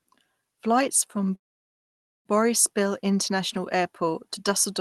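Call audio freeze, 1.35 to 2.28 s: the sound drops to near silence, likely from delayed packets emptying the jitter buffer, then resumes with nothing lost, 0.9 s late.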